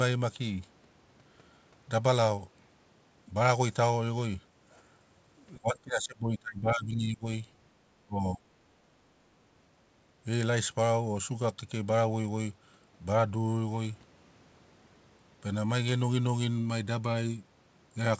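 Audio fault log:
5.58–7.26 s and 8.02–8.43 s: speech suppressed in double talk. The voice sinks by up to about 25 dB, likely an echo canceller ducking the near talker during overlapping speech.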